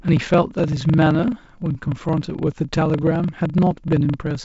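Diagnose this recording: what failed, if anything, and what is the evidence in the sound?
A block size mismatch (padded) runs through the whole clip, from 0 s to the end, at the driver or buffer stage. A steady buzz at 23.4 Hz sits under the speech, and the speech runs slow at 0.938 times its normal speed while keeping about its normal pitch. One stage hands over blocks shorter than the next one reads, which fits a 1024-sample read. The shortfall in each block is filled with silence, so the gaps repeat at the block rate. The G.722 wideband coding that carries the speech cuts off near 7.7 kHz.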